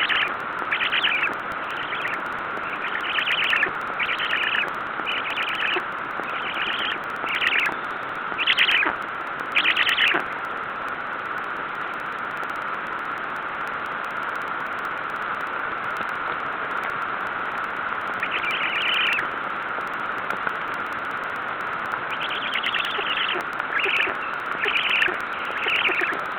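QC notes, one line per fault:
0.09–26.32 s, periodic USB or driver dropouts: a couple of milliseconds of audio is skipped every 0.062 s, giving a steady tick about 16 times a second. The even spacing, and the ticks sounding only while there is signal, mark a blocked bus or driver rather than random clicks.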